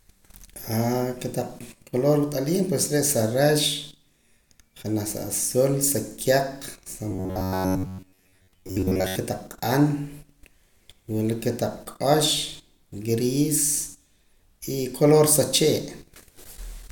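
From 7.11 to 9.16 s, audio likely arrived too seldom, so a short buffer of about 11 ms was replayed over most of the signal. This robotic sound from repeated short buffers turns the speech into a rigid, metallic 93.8 Hz buzz loosely following the words.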